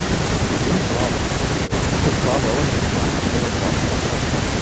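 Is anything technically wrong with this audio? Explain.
No, nothing is technically wrong with this audio.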